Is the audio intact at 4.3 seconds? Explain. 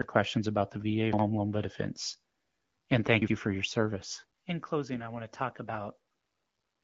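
Yes, the speech at 4.3 seconds is intact, with no dropout, click or other fault at that moment.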